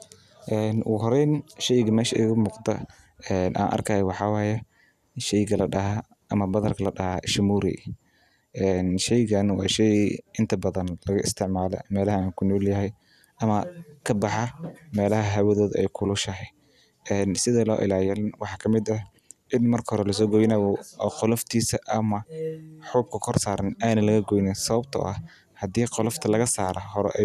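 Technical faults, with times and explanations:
No technical faults are audible.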